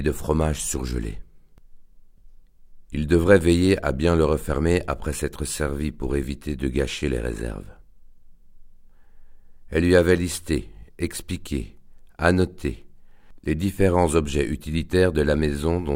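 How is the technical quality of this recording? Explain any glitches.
No technical glitches can be heard anywhere in the recording. The audio holds steady throughout, with no interruptions or disturbances to explain.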